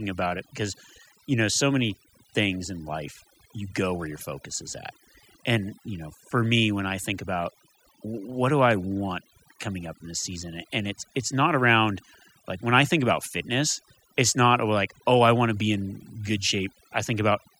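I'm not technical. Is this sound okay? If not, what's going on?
No. Overdone noise removal runs throughout: a cleanup tool set too strong erased background noise and quiet parts of speech, leaving twinkling specks.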